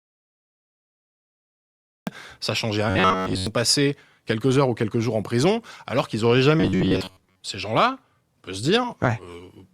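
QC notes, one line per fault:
0.00–2.07 s, audio dropout to silence: the input was most likely lost from the start, with the recorder writing silence until the link recovered. The clip opens in silence, with no room tone, hiss or breath, and the sound then starts abruptly already in progress at 2.07 s. Whatever occurred during those first two seconds is missing entirely and cannot be recovered.
2.90–3.47 s and 6.60–7.41 s, robotic sound from repeated short buffers: fresh audio arrived too slowly, and the playback side most likely filled the gaps by looping the last fragment of about 10.7 ms while skipping real material. Most of each span is repeated fragments, so the speech takes on a rigid, metallic buzz locked at 93.8 Hz, one over that fragment length. The rough shape of the speech survives beneath the drone.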